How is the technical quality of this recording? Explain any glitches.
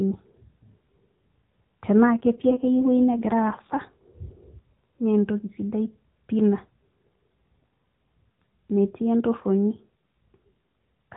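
The recording is narrowband mobile speech carried over AMR-NB, so nothing above 4 kHz comes through, with light codec colouring throughout. One glitch stands out: an AMR rate drop.

From 2.08 s to 3.82 s the voice turns rougher and more synthetic, with a buzzier edge, then returns to its earlier quality. The bandwidth stays the same and there is no gap or dropout; only the coding detail falls. That pattern fits the network ordering the AMR encoder down from 12.2 kbps to about 5.9 kbps on a weak radio link and spending the freed bits on error protection. With fewer bits for each 20 ms frame, the vocal-tract model is driven more coarsely.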